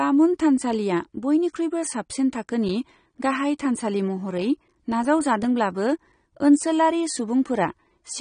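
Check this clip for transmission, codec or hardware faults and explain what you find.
The speech carries one fault for its whole length, AAC compression. On a spectrogram it shows as a hard ceiling at 9.7 kHz with patchy gaps below. Sibilants sound dull and fizzy, likely from AAC-LC at a low bitrate around 32 kbps.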